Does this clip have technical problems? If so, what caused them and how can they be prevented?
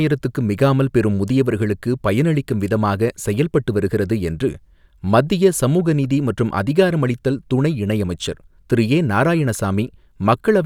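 No, there are no technical faults in this speech clip, so nothing needs fixing or preventing.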